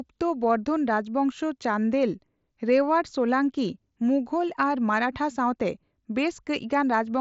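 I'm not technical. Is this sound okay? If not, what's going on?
Yes, nothing in this speech recording sounds wrong, so there's no problem here for you to worry about.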